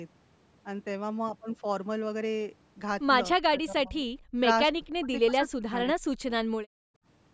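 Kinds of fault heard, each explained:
Speech suppressed in double talk: The speech dips three times between about 3.4 and 6.3 s, falling by about 40 dB at worst. The likely cause is an echo canceller that could not separate the talker from loudspeaker echo while both sides spoke, so it turned everything down.
Background gated by the echo canceller: From 6.63 to 7.05 s the room sound drops away, by about 38 dB at its deepest, then returns. While the loudspeaker was playing, the echo canceller clamped the microphone hard and then let go.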